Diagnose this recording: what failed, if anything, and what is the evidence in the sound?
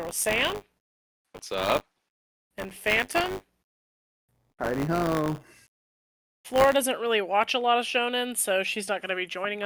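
The failure is at the driver/buffer stage: buffer tearing from 0 to 6.76 s, ending just before "really watch a lot". The speech carries a steady robotic buzz at 100 Hz, which points to a 10 ms buffer period. The writer and hardware reader have drifted into overlap, so a small slice of each period, a few percent, replays audio from about 20 ms earlier, with hard edges on either side that produce the rattle.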